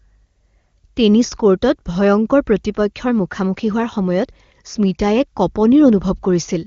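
No technical faults can be heard in this speech, which has passed through the AMR wideband (HD Voice) codec at its highest rate of 23.85 kbit/s, where any coding damage is faint at most.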